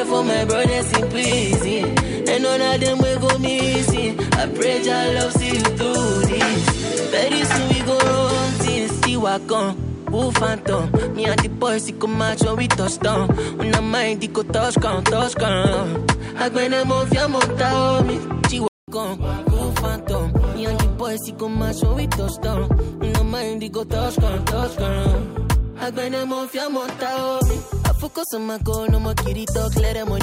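Input switched to a poorer device, from 0 to 18.88 s: for this stretch the sound is band-limited, with nothing above 10.5 kHz, so it comes across dull or boxy, with its own background noise sitting roughly 30 dB under the signal. At 18.88 s a short silence of about 200 ms separates it from the fuller, brighter sound that follows, with loudness roughly unchanged. The likely cause is the system changing its input partway through, from a narrower-band microphone or headset profile.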